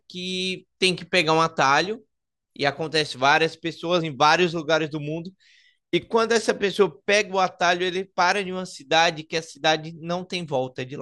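At about 4.00 s the speech jumps forward by roughly 50 ms, around two compressed frames of 23.2 ms each, dropped as missing or damaged. Unlike a dropout there is no silent gap.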